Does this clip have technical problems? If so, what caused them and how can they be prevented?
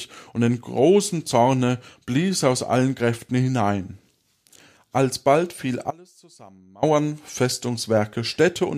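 Yes. An audio dropout to a faint residue runs from 5.91 s to 6.83 s, removing about 0.92 s of the speech. The level falls abruptly rather than fading, and the gap is not silent: a faint trace of the signal remains, roughly 25 dB below its normal level. The likely cause is a momentary loss of the main feed, such as an intermittent connector or brief source interruption, while the downstream chain stayed live and picked up leakage. Secure cabling and connections and monitor the input during recording to prevent it.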